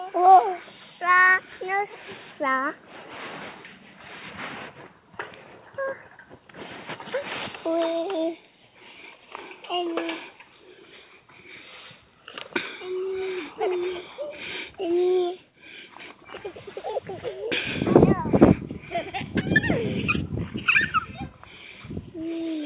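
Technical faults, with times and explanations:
Nothing stood out on listening, with the audio carrying the narrowband sound of a G.711 call path that has nothing above 4 kHz.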